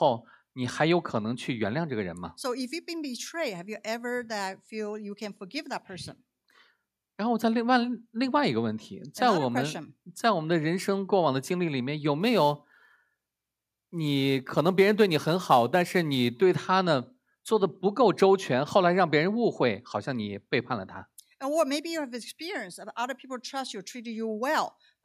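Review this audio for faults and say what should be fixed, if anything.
Sample clock jitter appears from 12.21 to 16.42 s: the converter's clock wanders by several microseconds, so each sample lands slightly off time, and the error scales with how steeply the waveform is changing. The result is a gritty hiss sitting roughly 25 dB below the signal, strongest on loud, bright passages. Unlike a steady noise floor, it follows the signal and disappears in silences. Prevent it by clocking the converter from a clean, stable, low-jitter reference.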